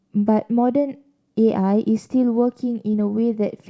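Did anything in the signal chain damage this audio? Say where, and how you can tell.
Yes. A short concealed packet loss at the network stage damages the speech at 2.92 to 2.95 s as a brief smear. About 20 ms of audio never arrived in time, and the receiver bridged the gap by extending the preceding sound before blending back into the real signal.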